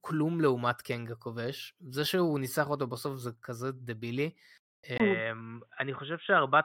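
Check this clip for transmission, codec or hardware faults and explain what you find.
One fault: at 4.98 s the speech turns boxy, likely an input switched to a poorer device, with a 20 ms gap, nothing above 3.8 kHz, and fresh background noise about 45 dB down.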